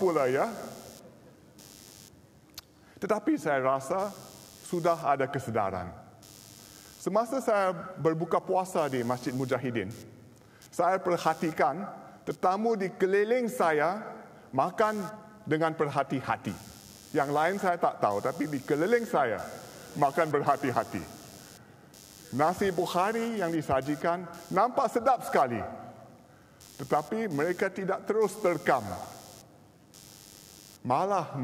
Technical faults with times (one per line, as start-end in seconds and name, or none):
0.00-31.43 computer activity noise